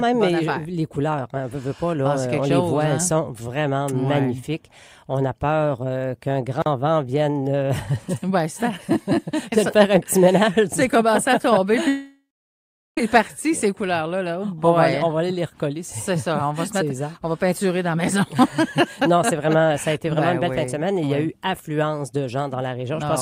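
At 6.62 s a 40 ms block of digital silence cuts in and out with no fade. From 11.88 to 12.98 s a likely long network dropout loses about 1.09 s: the last sound smears into a fading buzz or hiss, then about 0.75 s of silence follows before the audio resumes further on.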